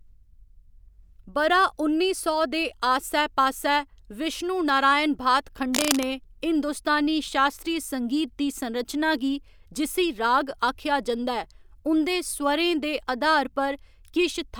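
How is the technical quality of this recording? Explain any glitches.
One glitch stands out. From 5.72 to 6.04 s, just after "आस्सै पास्सै विश्णु नारायण", a burst of cable scratch noise rasps over the speech, only slightly quieter than it. This is likely a worn cable or connector being moved, its contact resistance jumping rapidly and injecting ragged noise. On a spectrogram it appears as dense, broadband vertical smearing. In the waveform it shows as a fuzzy, irregular envelope lasting about a third of a second.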